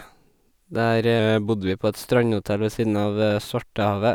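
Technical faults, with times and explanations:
1.19 to 1.70 s, drift correction step: the speech abruptly slows by 5.7% and drops 102 cents, about a semitone, then snaps back. Speed and pitch shift together. The likely cause is clock-matching software changing the playback rate in one step to rebalance its buffer.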